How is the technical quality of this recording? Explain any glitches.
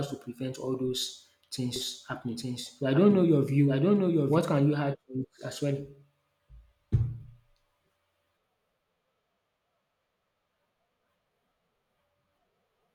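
The recording has one clear glitch. From 1.76 to 4.38 s, after "to prevent all those" and before "can you add to", there is a doubled audio track. A second copy of the speech trails about a second behind, roughly 5 dB quieter. It is likely a second capture through a slower path. The echo has no decay or room colour, and it switches on and off abruptly.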